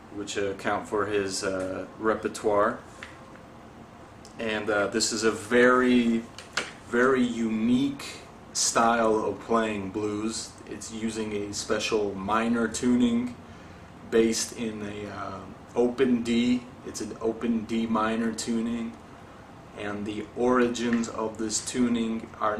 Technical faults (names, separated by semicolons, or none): none